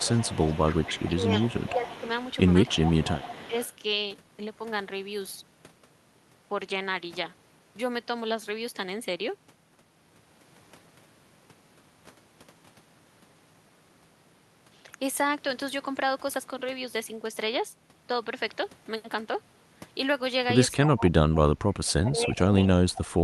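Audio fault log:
0.0–3.7 s, echo leak: a delayed copy of the speech trails the original by about 278 ms, sitting roughly 15 dB below it. This is likely a far-end loudspeaker echo that the echo canceller did not fully remove and sent back.
1.69–1.93 s, 2.74–3.01 s, 3.49–3.53 s, speech suppressed in double talk: the speech briefly dips by roughly 10 dB, 15 dB and 5 dB, likely because the canceller turned down the talker while the other side spoke at the same time.
20.93–23.24 s, speech suppressed in double talk: a longer, deeper dip of around 25 dB running to the end, with the same likely cause of overlapping talk being suppressed.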